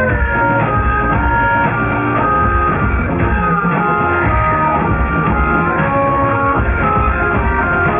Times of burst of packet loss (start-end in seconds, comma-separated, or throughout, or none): none